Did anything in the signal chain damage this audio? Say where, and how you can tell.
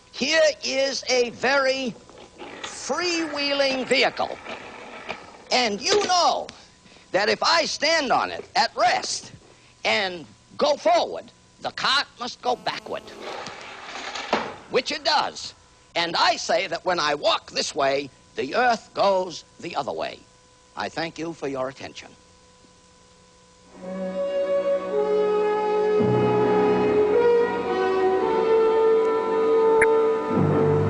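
Yes. GSM phone buzz entered through the analogue wiring from 12.46 to 13.36 s. It is a hard, raspy buzz near 217 Hz, rich in harmonics, about 26 dB below the signal. It stays steady, as during a call. The circuit is rectifying the phone's radio bursts.

DAB burbling appears in the codec stage at 14.19 to 14.25 s and 29.79 to 29.84 s. Brief blips of noise sit over the sound. Weak reception let a small number of bit errors slip past error correction. Damaged MP2 data put those short noise blips into single sub-bands.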